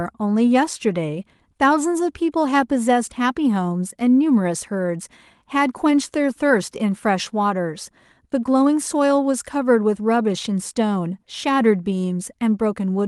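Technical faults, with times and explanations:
Nothing technical stands out in this speech recording; there's no fault to point to anywhere in it.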